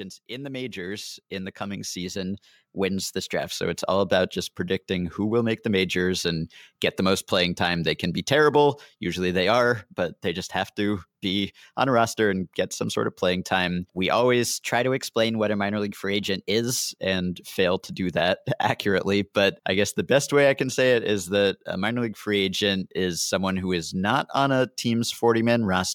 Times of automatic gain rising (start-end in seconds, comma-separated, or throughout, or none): 0.28-5.18